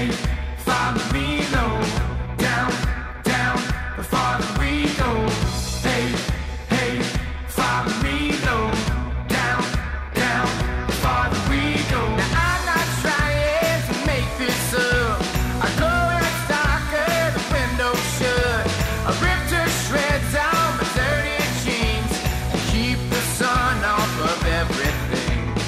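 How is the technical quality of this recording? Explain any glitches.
One short glitch stands out: a burst of DAB burbling from 21.10 to 21.12 s. Weak reception let a small fraction of bit errors, around a tenth of a percent, slip past the error correction into the MP2 stream, corrupting samples so individual sub-bands got short blips of noise. That fits about three damaged frames. It sounds like a few quick watery blips, with band-limited burbling rather than a silent dropout or broadband click.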